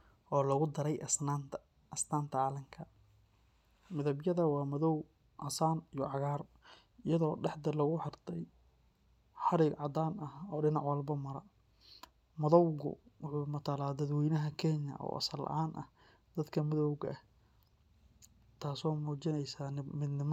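No technical faults are audible.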